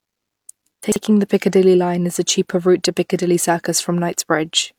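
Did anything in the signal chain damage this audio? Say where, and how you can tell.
Yes: chunks out of order at the buffer stage, 0.84 to 0.96 s. A 40 ms chunk plays two chunks late, leaving three hard joins and a jumbled moment, the joins seen as vertical spectrogram lines.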